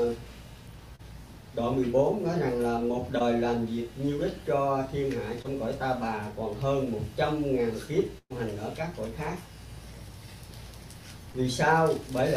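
Running under the whole clip is computer activity noise: processor, graphics or mouse load disturbing the audio circuit's shared ground. It produces a faint buzz pulsing at around 200 times a second, well below the sound, that follows the machine's activity rather than the sound itself.

At 0.95 s, 3.19 s, 5.42 s and 11.32 s there is short concealed packet loss. Between 20 and 40 ms of audio never arrived, and the receiver filled the gap by extending the last sound before blending back in. Each is a brief smear or wobble, not a gap.

From 8.18 to 8.32 s a burst of packet loss is heard. About 120 ms of audio was lost, so the receiver carried the last sound forward for roughly 120 ms and faded it, with about 50 ms falling silent. The sound then resumes further on. It is longer and more audibly broken than the short losses.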